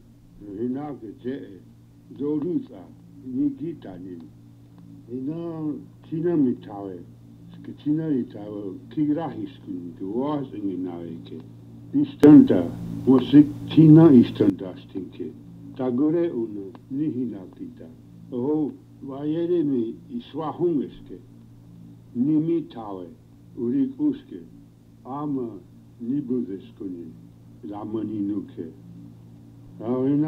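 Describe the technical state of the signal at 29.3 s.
At 29.3 s the signal is intact, with no dropouts, clicks, distortion or other faults audible at that moment.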